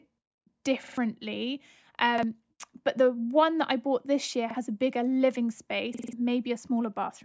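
At 0.84 to 0.98 s, 2.18 to 2.23 s, 4.51 to 4.55 s and 5.94 to 6.13 s the speech stutters. Each is a repeated buffer. Fresh audio came late, so the device replayed its last chunk. That chunk lasts 46.44 ms, which fits a 2048-sample buffer. It sounds three extra times at 0.84 s, once at 2.18 s and 4.51 s, and four times at 5.94 s. Each repeat joins hard and gives a short stutter. Roughly 50 to 200 ms of speech is lost each time. The call microphone processing leaves nothing above 8 kHz.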